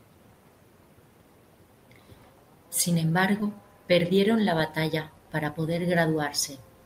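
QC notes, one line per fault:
3.40 s, short concealed packet loss: about 10 ms of the speech stream arrived too late for the decoder, so the receiver synthesised 8 ms by extending the preceding sound and crossfading back, leaving a tiny smear or wobble where the real audio briefly drops out.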